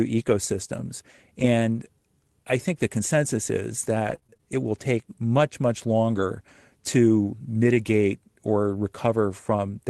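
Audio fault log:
3.99–4.43 s, repeated packet loss (robotic sound): packets kept going missing or arriving late, and the decoder filled each hole by stretching the last sound it had. About 140 ms is missing across the span, the longest hole 25 ms, so the speech turns choppy.
7.74–7.76 s, lost packet rebuilt from error correction: one 20 ms packet was lost, and the decoder replayed the low-bitrate copy carried in the next Opus packet. There is no gap, but this short frame sounds rougher and noisier than its neighbours.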